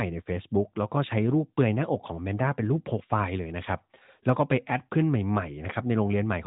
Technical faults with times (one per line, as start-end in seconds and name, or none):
none